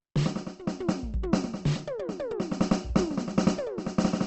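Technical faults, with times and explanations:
Throughout, Opus compression: likely a low-rate CELT encode, near 16 kbps; the music sounds grainy and rough, with noise-filled bands and nothing above 8.2 kHz.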